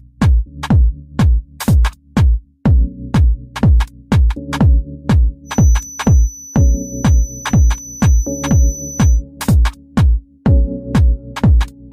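From 5.43 to 9.23 s, a thin 6 kHz feedback whistle sits roughly 20 dB under the sound, likely a speaker-to-microphone loop poised at instability.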